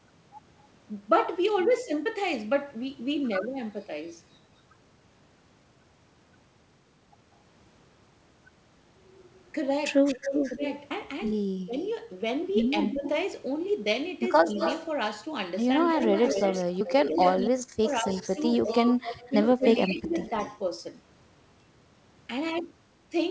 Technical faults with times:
2.05 audio missing between chunks
10.06-20.58 echo leak
10.55-14.49 speech suppressed in double talk
10.90 audio missing between chunks
16.07-20.16 speech suppressed in double talk
16.80 audio missing between chunks

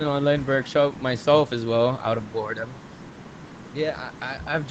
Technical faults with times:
none

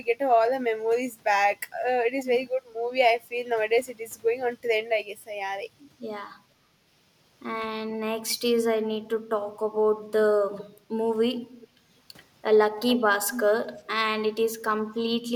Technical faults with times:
6.53-6.78 background gated by the echo canceller
10.58-10.80 echo leak
11.34-11.68 echo leak
11.69-11.85 background gated by the echo canceller
12.88-13.00 echo leak
13.31-13.48 echo leak

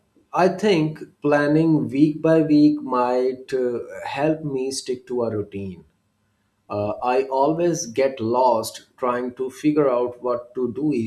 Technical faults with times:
none

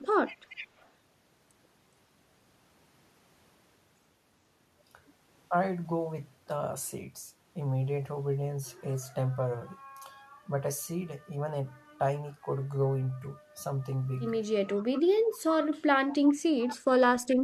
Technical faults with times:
0.27-0.89 echo leak
14.77-15.00 echo leak
15.17-16.81 speech suppressed in double talk
16.59-16.70 echo leak
17.27-17.35 echo leak

